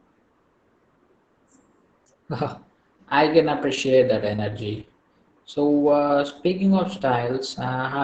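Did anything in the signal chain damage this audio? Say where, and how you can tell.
Yes, at the codec stage, throughout: Opus voice compression in SILK mode, wideband, with heavy damage that fits about 10 kbps. The speech sounds muffled because the band is narrowed, and hoarse and slightly robotic because the excitation is coded coarsely. A plain low-pass would only dull it, not roughen it.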